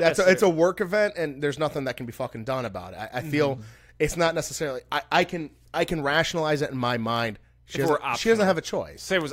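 From 0.17 to 9.21 s, sharp ticks of uneven strength recur roughly every 0.3 s: word clock ticks, as an unlocked receiver drops or repeats single samples.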